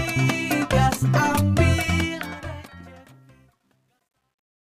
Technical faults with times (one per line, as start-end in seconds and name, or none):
1.85-4.62 truncation distortion on a fade